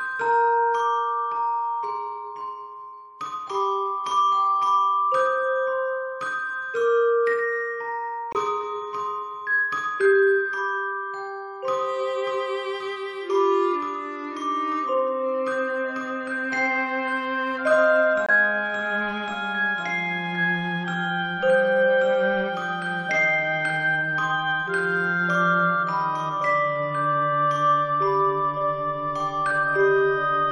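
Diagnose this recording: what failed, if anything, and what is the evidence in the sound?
Two abrupt dropouts to silence, at 8.33 s and 18.26 s, each lasting about 42 ms, are the signature of a corrupt frame muted at the codec stage. The sound cuts off mid-flow and resumes without any shift in timing, so nothing was lost from the timeline. Bit errors in the compressed stream made the decoder reject the damaged data, and the player substituted silence for the rejected frames, one at 8.33 s and two at 18.26 s.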